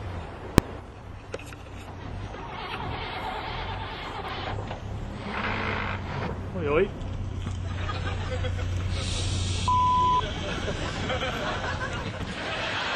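At 0.58 s there is a single loud bang. These are invalid numbers at full scale. A calculation produced infinite or undefined values, and the output was pinned to one extreme value for about 1.45 ms, which fits a 64-sample block. The block is too short to hear separate pops.

At 1.13 s comes a brief blur of about 10 ms. These are lost LE Audio frames, consistent with a single dropped frame. The LC3 decoder filled the gap by repeating the last spectrum with random signs, so the sound turns into a short noisy smear.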